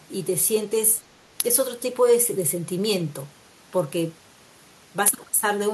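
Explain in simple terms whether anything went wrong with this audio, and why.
Nothing went wrong with this audio, because no faults can be heard anywhere in the recording.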